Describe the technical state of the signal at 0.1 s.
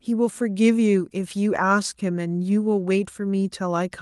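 At 0.1 s the speech comes through intact, with no dropout, click or other fault audible at that moment.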